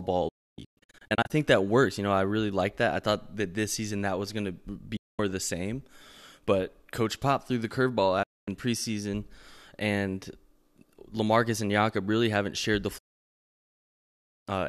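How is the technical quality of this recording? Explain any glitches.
The speech is interrupted four times by a digital broadcast dropout. From 0.28 to 1.31 s it breaks into several short holes totalling about 0.62 s, the longest 0.29 s. Single gaps follow at 4.96–5.19 s and 8.23–8.48 s, and a long one at 12.98–14.48 s. The receiver lost valid frames and muted, fading out within 8 ms, so the speech vanishes abruptly and resumes later. On a waveform these show as flat, near-silent stretches, and on a spectrogram as dark vertical bands.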